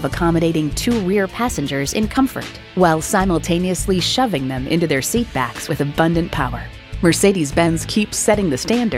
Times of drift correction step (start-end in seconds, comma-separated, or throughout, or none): 1.13-2.09, 7.67-8.25